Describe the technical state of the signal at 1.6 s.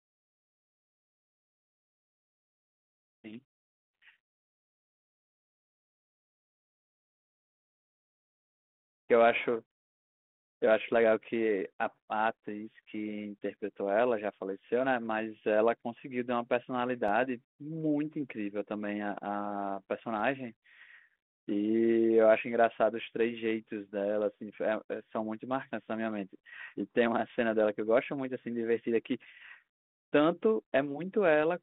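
At 1.6 s the audio is intact, with no fault present, only the narrow 200 Hz to 3.5 kHz telephone band of the G.726 ADPCM path running at 32 kbit/s.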